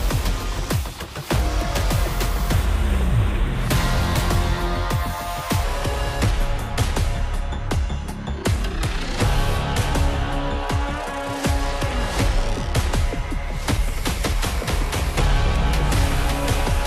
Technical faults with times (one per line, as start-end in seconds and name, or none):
5.64-16.87 section at the wrong speed